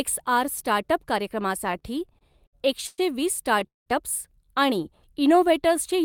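From 1.67 to 3.00 s there's a stutter, eleven repeated stalls where late packets drained the jitter buffer. About 283 ms gets filled in, the longest gap 111 ms, so the audio drags rather than losing anything.

At 3.67 s a call audio freeze holds things up for about 193 ms, most of it about 170 ms of silence, likely from packets stuck in transit, before picking up where it stopped.

Then from 4.79 to 5.77 s there's a jitter buffer slow-down. The receiver stretches the audio by repeating pitch periods, adding about 60 ms and running at 94% speed, so it sounds slightly drawn out at the same pitch.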